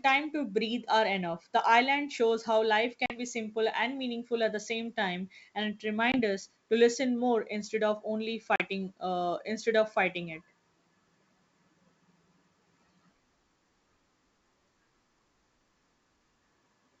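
At 3.06–3.20 s, 6.12–6.21 s and 8.56–8.62 s, packet loss on the ADPCM call cuts hard-edged silent gaps of 40, 20 and 40 ms. These show as flat waveform breaks and blank spectrogram bands. Afterwards the decoder's out-of-step predictor briefly brings the speech back distorted or at the wrong level.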